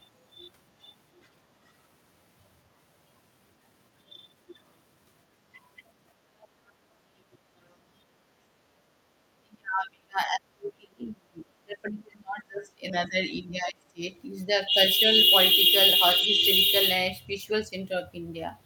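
At 6.41 to 6.47 s and 7.33 to 7.37 s, brief faint scraps of another voice appear, far below the talker. This is likely the other side's voice leaking through past the echo canceller. From 7.42 to 7.53 s the room sound drops by about 12 dB. The background is being gated by the echo canceller while the loudspeaker plays. From 9.45 to 14.03 s the talker's voice dips hard, by around 30 dB at worst. It dips again, by about 10 dB, at 16.23 to 16.43 s. This is likely speech suppressed in double talk.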